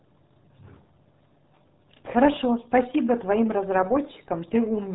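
From start to finish the speech has passed through the RealAudio 14.4 codec, the old dial-up RealAudio 1 format. The damage is heavy and fits an encoder squeezing the signal to about 8 kbit/s. To manage that, it discards everything above 3.8 kHz and rebuilds the rest from a coarse speech model. The voice comes out muffled and dull, missing the crisp consonant detail, and the vowels carry a wet, gargly texture throughout.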